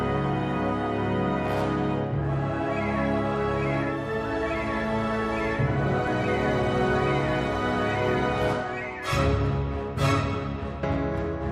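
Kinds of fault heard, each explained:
Overlap between stream segments: two segments' timestamps overlap, so the player trims about 5 ms of sound that was never duplicated, leaving a tiny skip at 6.07 s near a 6-second segment boundary. The waveform shows an abrupt step, and the spectrogram a thin vertical broadband line.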